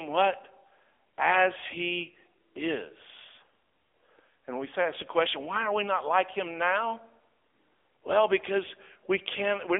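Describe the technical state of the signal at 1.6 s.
At 1.6 s the speech sounds buzzy, thin and synthetic, with nothing above about 3.7 kHz, from the AMR narrowband mobile codec across the whole clip; the damage fits a low mode near 7.95 kbps.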